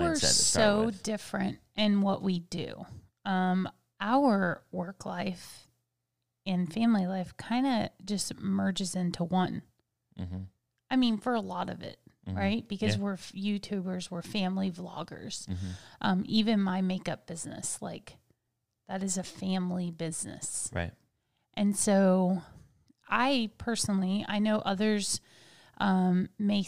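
A recording of speech, with nothing technically wrong to be heard in it. No fault turns up at any point, so there are no times or causes to give.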